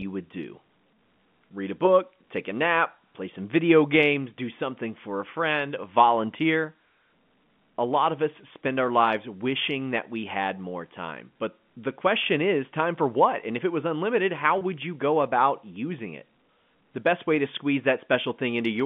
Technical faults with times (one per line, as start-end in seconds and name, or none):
14.58-14.61 packet loss with pitch repetition